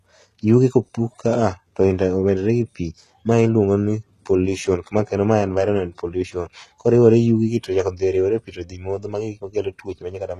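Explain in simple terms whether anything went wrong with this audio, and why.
Something did go wrong, and it lasts from start to finish. The speech has a plainly audible gritty, metallic edge, most noticeable on s sounds, which come out lispy, and nothing is heard above about 13.3 kHz. This is likely HE-AAC compression at a low data rate. That codec stores only the lower part of the sound properly and fakes the treble by copying lower bands upward, so the top end is not the original sound.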